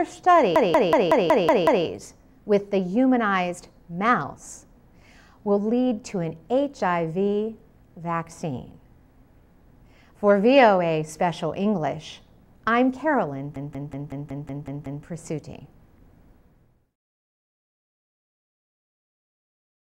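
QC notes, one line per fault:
0.56–1.86 s and 13.56–15.05 s, system hang loop: A 186 ms slice repeats exactly, seven times and then eight times, as the hardware cycles a frozen ring buffer. The 5.4 Hz repeat rate gives a machine-gun stutter, which fits an 8192-sample buffer.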